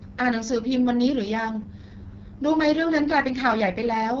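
Throughout, the speech carries AMR wideband (HD Voice) codec damage. It sounds rough and raspy, with nothing above 7.5 kHz, pointing to the codec's lowest 6.6 kbit/s rate.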